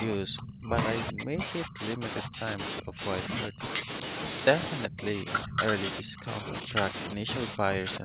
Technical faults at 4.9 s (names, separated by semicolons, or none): echo leak; speech suppressed in double talk